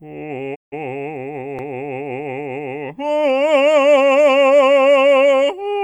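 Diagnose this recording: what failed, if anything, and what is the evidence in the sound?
A digital broadcast dropout hits the music from 0.54 to 0.74 s, at the reception stage. The sound fades out over about 20 ms, stays silent for roughly 160 ms, then picks up further along in the programme, so the material sent during that gap is gone. That hole points to about five lost frames: the receiver lost the signal or got frames that failed their checksum, and it muted until valid frames arrived again.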